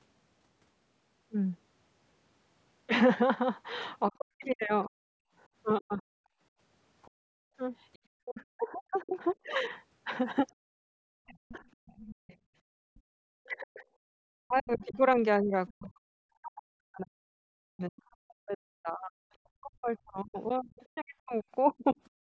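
From 4.1 to 6.03 s the speech dips hard, around 40 dB at worst, in pieces adding up to about a second. That's speech suppressed in double talk, likely because the echo canceller couldn't tell the talker from the loudspeaker echo and pulled both down.

Between 6.31 and 7.56 s the background is gated by the echo canceller, with the room sound dropping by about 36 dB for roughly half a second while the far end played.

From 7.02 to 12.99 s the other side's voice is leaking through, faint at maybe 25 dB under the talker, likely residual echo the canceller left behind.

Inside that stretch, 8.21 to 11.61 s brings more double-talk suppression, with chunks totalling about a second and a half cut by up to roughly 40 dB, likely the same canceller confusion.

From 12.15 to 13.11 s the background gating returns, the room sound dipping by about 34 dB for around 0.7 s.

From 13.39 s to the end the speech is repeatedly ducked by up to roughly 40 dB, about seven seconds in total, most likely double-talk suppression again.

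From 14.82 to 15.72 s the far-end voice bleeds through once more, around 20 dB down, likely leftover echo.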